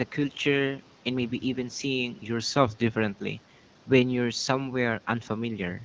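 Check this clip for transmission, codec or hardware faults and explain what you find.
No transmission, codec or hardware faults turn up in this speech clip. It carries the narrowed top of a wideband call, with nothing above 8 kHz, and the AMR-WB coding at 12.65 kbit/s leaves only light traces.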